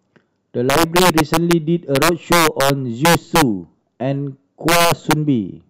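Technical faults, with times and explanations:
0.70–1.53 s, 1.96–2.70 s, 3.05–3.42 s and 4.69–5.13 s: integer overflow. Loud speech peaks, driven about 4 dB past full scale (about 7 dB in the last stretch), wrap to the opposite sign instead of limiting, so each peak snaps across the full range as harsh cracks far sharper than clipping.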